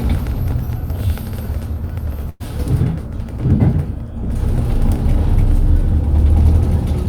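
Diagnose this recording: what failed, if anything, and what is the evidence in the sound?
The network stage failed: a burst of packet loss around 2.29 to 2.42 s. Several consecutive packets never arrived in time, so the receiver's concealment stretched the last good sound across the hole for about 105 ms, holding it and letting it sag in level rather than dropping to silence. When real packets resumed, about 100 ms of the original sound had been skipped, so the audio picks up further along with that stretch missing.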